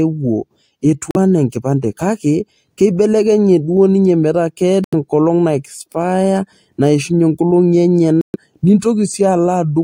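Brief silences at 1.11, 4.84 and 8.21 s, each resuming further along, skipping about 43, 85 and 128 ms; likely a Bluetooth dropout from late packets.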